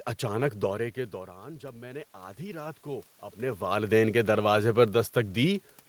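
From 1.6 to 3.66 s, after "اچانک دورے کے دوران" and before "کے دروازے پر", there is automatic gain rising. The input fell by about 15 dB. The gain control slowly added about 4 dB. Voice and room noise swell together over two seconds.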